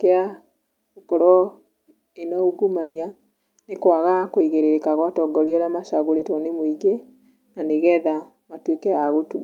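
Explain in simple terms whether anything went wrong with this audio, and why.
At 2.81 to 2.97 s there is a burst of packet loss. About 140 ms of speech never arrived. The receiver stretched the last sound and faded it out, then skipped ahead.

At 5.45 to 5.49 s, and at 6.17 to 6.21 s just before "nĩ mũingĩ", there is short concealed packet loss. Each time about 20 ms went missing. The receiver patched the hole, leaving a brief smear.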